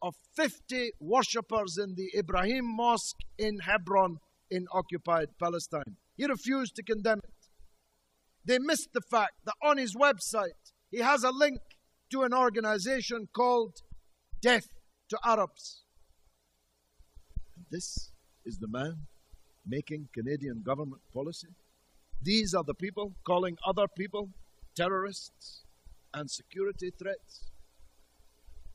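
No technical faults can be heard anywhere in the recording. At no point does anything in the audio stand out as a problem.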